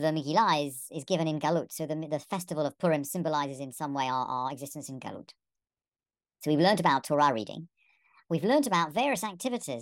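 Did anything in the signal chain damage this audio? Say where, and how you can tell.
Yes. There is a wrong sample rate fault at the playback stage. The samples are being clocked out faster than they were captured, with no rate conversion between. From start to finish, the speech runs about 1.38 times too fast, and every pitch sits roughly 5.55 semitones high, giving a hurried, chipmunk-like voice. Speed and pitch shifting together by the same ratio is the giveaway, and that ratio fits 32 kHz material played back at 44.1 kHz.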